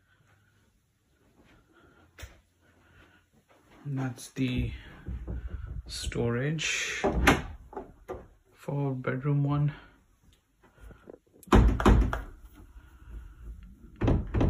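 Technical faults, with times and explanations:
11.80 s to the end: doubled audio track. A full-band copy cuts in abruptly and runs to the close, trailing by about 300 ms at roughly equal level. It has no decay or room colour. The likely cause is a second, slower capture path.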